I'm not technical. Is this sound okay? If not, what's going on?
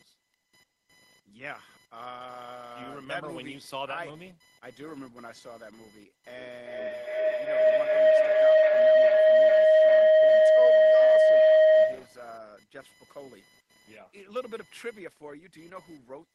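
No. Two problems are audible. Computer activity noise runs under the whole clip: a faint buzzing chirp, pulsing around a thousand times a second, caused by the computer's own workload leaking into the audio wiring. Unlike background hum, it rises and falls with what the computer is doing, not with the speech.

From 6.26 to 12.24 seconds there is a feedback howl. Two devices on the same call in one room keep re-catching each other's sound, so it grows into a loud, mid-pitched tone, with the sound coming back around roughly every 0.4 seconds. Unlike an echo, it gets louder instead of fading, until the loop is broken.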